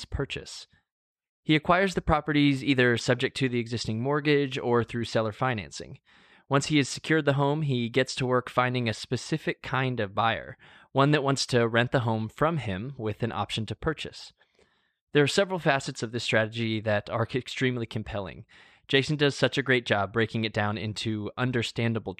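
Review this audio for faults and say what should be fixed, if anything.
No faults found in this speech recording, so nothing needs fixing.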